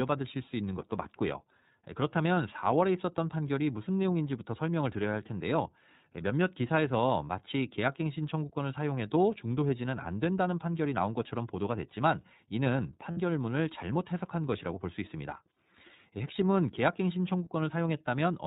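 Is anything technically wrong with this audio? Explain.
Yes. The speech has been through the iLBC codec, and it also contains two short dropouts where frames were lost and concealed.

iLBC codec, throughout: Nothing above 4 kHz survives, and the speech has a slightly rough, synthetic edge. The codec damage is plainly audible. The sound fits the 13.33 kbps mode with 30 ms frames, where each frame's excitation is coded on its own. A simple low-pass filter would not do this. It would cut the top end but leave the remaining sound natural, without the grainy, artificial texture heard here.

Lost iLBC frames, at 13.11 to 13.17 s and at 15.55 s: The first gap lasts about 60 ms, which fits two lost frames. The second fits a single lost frame. In each gap the decoder repeats the last pitch cycle mixed with noise, so the gap sounds like a briefly held, buzzy vowel rather than silence. Plain packet loss without concealment would leave a hard hole instead. 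Because iLBC frames stand alone, the speech recovers immediately afterward and does not smear over the following syllables.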